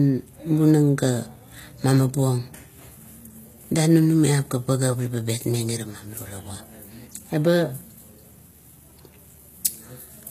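Throughout the speech, the s sounds come out gritty and lispy over a synthetic-sounding treble, likely HE-AAC compression at a low bitrate near 20 kbps, rebuilding the highs by band replication.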